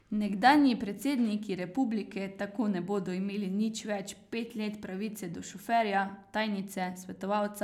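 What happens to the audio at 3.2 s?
Nothing goes wrong at 3.2 s; the speech continues intact through that moment, with no dropout, click or glitch to be heard.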